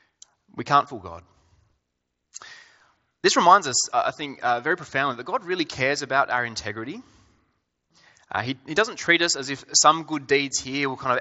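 Nothing is technically wrong with this speech clip.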